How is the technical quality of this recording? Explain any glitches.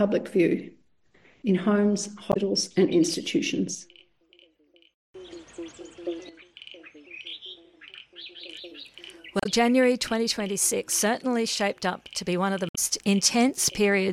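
Three short glitches spoil the recording. All are damaged data in a compressed stream, at 2.29–2.37 s, 9.38–9.46 s and 12.69–12.78 s, each under a tenth of a second. Bad bytes make the decoder misread frames and hunt for sync. The result is a brief chirp, squawk, click or short hole.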